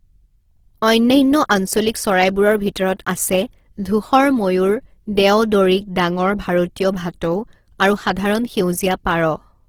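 Throughout the speech, the tone sounds rough and grainy under a noisy sheen, while the bandwidth stays full to about 20.2 kHz. The likely cause is Opus compression in its music mode, filling starved bands with noise or folded copies, consistent with roughly 16 kbps.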